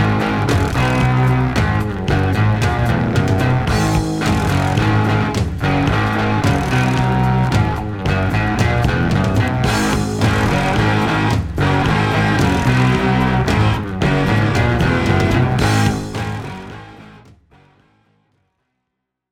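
No technical faults can be heard anywhere here.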